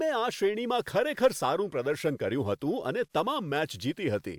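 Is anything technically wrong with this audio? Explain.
No, nothing technically wrong stood out on listening to this speech recording.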